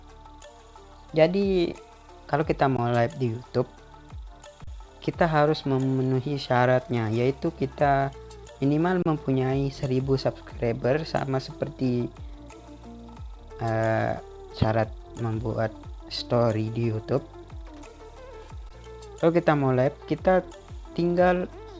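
At 2.77 s, 4.64 to 4.67 s, 9.02 to 9.06 s and 18.69 s, underruns with held sample flatten the waveform for 16 or 32 ms, leaving blank vertical strips on the spectrogram. The sound briefly freezes, then resumes where it stopped with only a soft edge.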